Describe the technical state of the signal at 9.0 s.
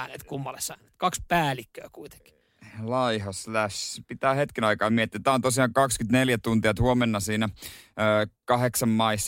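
At 9.0 s the speech signal is intact, with no audible technical fault at that moment.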